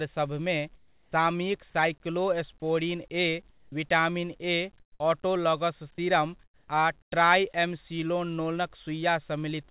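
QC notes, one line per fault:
0.76–1.12 s, 3.5–3.72 s, 4.8–5.0 s (just before "ऑटोलॉगस सीरम आ"), 6.44–6.68 s (after "ऑटोलॉगस सीरम") and 7.02–7.12 s (after "ऑटोलॉगस सीरम आ"): comfort noise in place of the background. Pauses turn into flat, featureless hiss about 4 to 11 dB quieter, likely from discontinuous transmission filling silence with synthetic noise.
2.6–2.62 s: sound dropped by the voice detector. About 10 ms of sound vanishes into steady noise, likely because the detector misjudged it as background and stopped sending.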